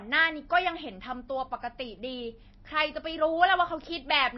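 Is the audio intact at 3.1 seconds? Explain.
No. At 3.1 seconds the sound carries MP3 compression damage, as it does throughout. Nothing is heard above 5.8 kHz. Weak frequency lines flicker on and off, giving a watery, swirly texture and smeared attacks. The likely cause is a low bitrate, around 24 kbps.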